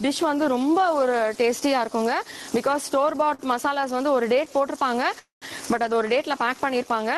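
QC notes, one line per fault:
Throughout: gain pumping. The level keeps swelling and ducking, and the swing is around 15 dB. Loud and soft passages sit closer together than they should. The sound is squashed. The likely cause is input gain set far too high, with a fast limiter or compressor pulling it back on every loud sound.
3.25 to 3.85 s: repeated stalls (stutter). The audio catches four times in this span. About 74 ms is filled in, and the longest hold is about 45 ms. Roughly an eighth of the span is patched. Nothing is lost, but the flow drags and stutters. Packets kept arriving late or too slowly, so the jitter buffer ran dry repeatedly. Each time, the receiver stretched the last sound until it could continue.
5.19 to 5.44 s: call audio freeze. The audio stops for about 228 ms, then resumes where it left off. Nothing is skipped. Part of the hold is a continuation of the last sound, and about 140 ms of it goes silent. 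That pushes everything after it about 228 ms later. The likely cause is packets held up in transit, emptying the jitter buffer, so the receiver concealed the wait over an Opus path at 20 kbps, band-limited near 12 kHz.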